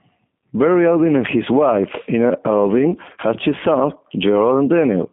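Throughout, the speech carries plain G.729 codec damage. Nothing passes above 3.6 kHz, leaving a 150 Hz to 3.5 kHz band that fits an 8 kbit/s line. Unlike simple band-limiting, the speech is rebuilt from a filter and sparse pulses, so it sounds rough and synthetic, not merely muffled.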